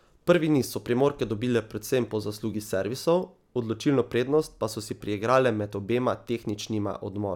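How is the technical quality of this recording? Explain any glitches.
The recording has one fault, sample clock jitter, in its last stretch. From 5.97 s to the end, after "so si priigrale med", samples are taken at instants wandering by about 1.5 microseconds. Error follows waveform slope, producing a roughness around 45 dB below the speech that swells on loud, bright sounds and vanishes in pauses; a spectrogram shows a faint high-frequency haze tracking the speech energy.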